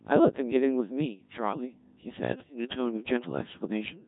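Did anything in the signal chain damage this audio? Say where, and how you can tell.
Yes: a Codec 2 vocoder runs throughout, at the codec stage. The speech is robotic and buzzy, with nothing above 3.8 kHz, and the heavy damage fits a rate around 1.3 kbit/s. Only pitch, voicing, energy and envelope survive; the decoder rebuilds the voice from sine waves.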